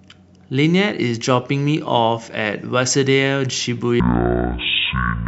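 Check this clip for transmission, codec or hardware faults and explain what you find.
One fault appears: stereo read as mono, from 4.0 s to the end. Interleaved left and right samples play as one channel, so the speech drops to half speed, an octave lower.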